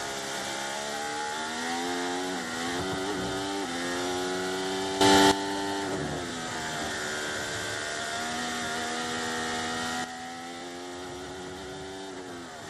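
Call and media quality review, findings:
Sudden gain jump: 5.01–5.32 s level up about 12 dB, 10.04 s onward down about 8 dB, noise floor shifting too. Likely unramped digital gain step.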